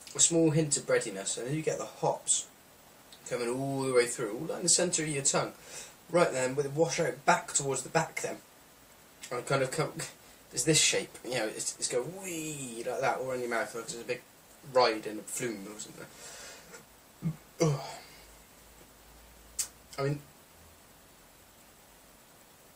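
No technical faults can be heard at any point in the audio.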